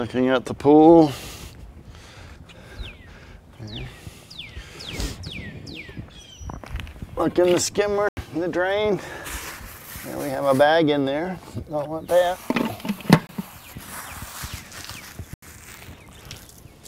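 Blocks of digital silence at 8.09 to 8.17 s, 13.27 to 13.29 s and 15.34 to 15.42 s: the output buffer likely went unfilled, leaving abrupt zeroed gaps of 85, 21 and 85 ms, consistent with 4096- and 1024-sample buffers, each a short hole.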